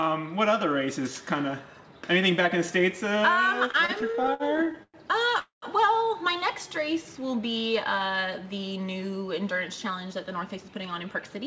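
Repeated stalls (stutter) run from 3.71 to 4.97 s. Late packets kept emptying the jitter buffer, so thirteen short gaps, the longest 108 ms, are filled with continued sound, and the audio drags and stutters.

A call audio freeze at 5.39 to 5.65 s fills 235 ms, holding the last sound as it fades into about 110 ms of silence before resuming. It was likely caused by delayed packets draining the buffer.

A jitter buffer slow-down from 6.69 to 7.33 s repeats pitch periods to rebuild the buffer reserve, adding 46 ms. The audio plays at 94% speed, drawn out but at unchanged pitch.

A jitter buffer speed-up from 9.16 to 11.31 s trims short pitch-period pieces, about 150 ms in all, to shed excess delay. The sound runs at 107% speed and feels hurried. Throughout the clip the call codec leaves nothing above 8 kHz, which fits G.722 at 64 kbps.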